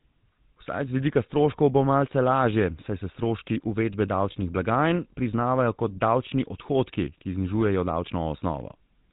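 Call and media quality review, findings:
GSM full-rate codec damage throughout, plainly audible. Buzzy, gravelly roughness on speech; nothing above 3.8 kHz. Regular-pulse excitation with thinned residual, consistent with 13 kbps full rate. Unlike plain band-limiting, the grit comes from the excitation model, not just dullness.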